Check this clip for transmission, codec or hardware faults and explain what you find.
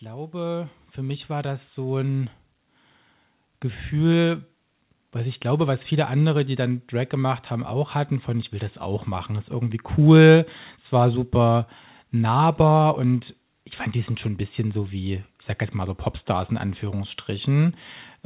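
One fault stands out: automatic gain rising, heard over a call path whose sound stops at 4 kHz, consistent with G.711 A-law at 64 kbps. From 0.05 to 2.38 s, the automatic gain control judges the input too quiet and lifts its gain by about 10 dB. Speech and background noise swell together, which separates it from a talker simply moving closer, where only the voice would grow.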